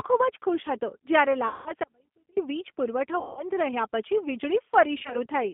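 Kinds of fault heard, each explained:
G.729 codec: The speech throughout sounds rough and synthetic, with the damage plainly audible and the sound confined to a telephone band of about 200 Hz to 3.5 kHz. This is G.729, a low-rate VoIP codec consistent with about 8 kbit/s. It rebuilds each 10 ms frame from a vocal tract filter, a pitch predictor and a handful of pulses rather than the actual waveform, so fine detail is lost.
VoIP packet loss concealed by the speech codec: The voice smears into a stretched sound that fades, then recovers weakly, at 1.48 to 1.73 s and 3.19 to 3.43 s, each covering about 180 ms of lost audio. From 4.99 to 5.20 s, shorter scattered gaps of about 20 ms each add up to about 80 ms. The decoder fills missing packets by repeating its last pitch and filter at falling gain, and because each frame builds on the previous one, the voice stays distorted briefly afterwards.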